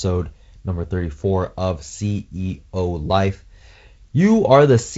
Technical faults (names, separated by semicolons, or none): none